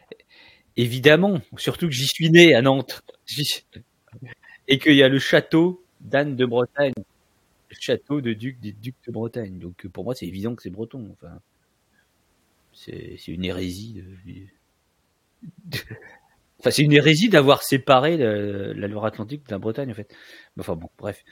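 At 6.93 s the speech drops out abruptly for about 37 ms, resuming at 6.97 s exactly where it left off, with the edges of the hole softened rather than clean. This is a gap at a join of encoded pieces: two separately encoded segments were spliced without trimming, so the encoder's start-up delay and the padded final frame of the earlier piece both remain, leaving a short stretch of silence inside otherwise continuous sound.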